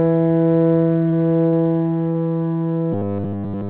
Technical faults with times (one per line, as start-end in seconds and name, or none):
1.10-1.14 short concealed packet loss
1.48-1.54 short concealed packet loss
2.10-2.16 short concealed packet loss
2.93-3.69 robotic sound from repeated short buffers